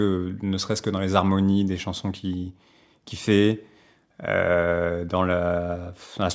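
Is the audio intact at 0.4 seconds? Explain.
Yes, the speech at 0.4 seconds plays through intact, with no audible fault at that moment.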